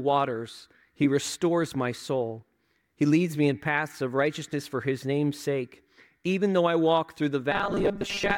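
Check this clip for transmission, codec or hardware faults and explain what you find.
One fault appears at the very end. From 7.52 to 8.37 s, robotic sound from repeated short buffers: most of the audio is replaced by repeats of a roughly 5 ms slice, likely from audio arriving too slowly. This forces a rigid 200 Hz metallic buzz, seen as evenly spaced harmonic stripes on a spectrogram and identical repeating cycles in the waveform.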